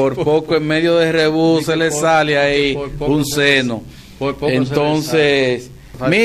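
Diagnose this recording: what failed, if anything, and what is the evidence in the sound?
DECT cordless phone buzz throughout: a faint, thin 100 Hz buzz rich in harmonics, far below the signal, from a nearby DECT radio burst rectified in the analogue wiring.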